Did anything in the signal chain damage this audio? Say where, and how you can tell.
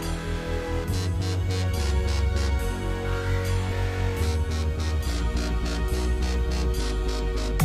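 Yes. At the codec stage there is damaged data in the compressed stream, heard as a brief disturbance from 3.67 to 3.72 s, lasting about 50 ms. Some bytes in the encoded file or stream were lost, zeroed or overwritten, so the decoder misread or rejected the frames at that point and lost sync. While it searched for the next valid frame header, it produced this short disturbance.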